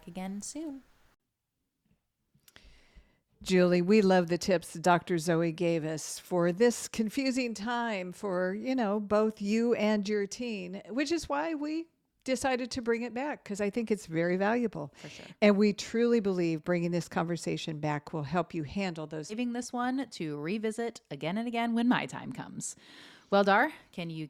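At 19.29 to 19.34 s the speech jumps ahead with a brief blip, likely a stream segment skipped, with playback resuming at the next segment.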